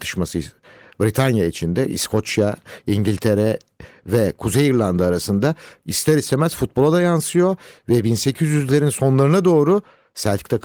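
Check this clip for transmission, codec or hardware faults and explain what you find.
Nothing here sounds wrong at all; the speech simply carries the light, ordinary character of Opus voice coding in its hybrid fullband mode, with sound reaching up to about 20 kHz.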